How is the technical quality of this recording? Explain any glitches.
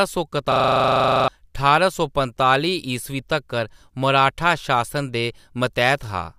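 The recording has one clear glitch, a system hang loop. From 0.52 to 1.28 s, just before "ठारां सौ", the system froze while the sound hardware kept replaying its ring buffer. One 40 ms slice of speech repeats nineteen times, producing a steady 25 Hz buzz and losing roughly 0.7 s of speech. On a waveform, the stretch appears as identical repeating blocks. On a spectrogram, it shows as evenly spaced vertical stripes at 25 per second.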